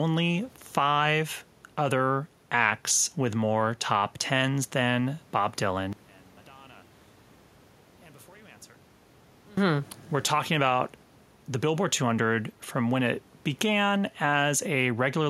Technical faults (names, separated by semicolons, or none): one channel inverted